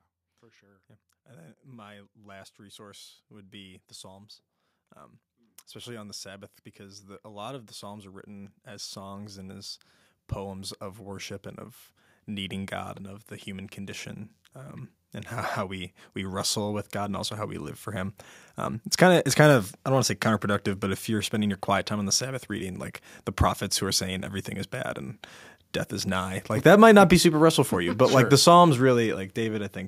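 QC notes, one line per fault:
0.41–9.8 s, 10.34–12.8 s, 15.54–17.83 s: automatic gain rising. The gain control judged the input too quiet and raised its gain slowly. Speech and background swell together, by about 15 dB, then about 4 dB before "and of the human", then about 5 dB after "condition um and how".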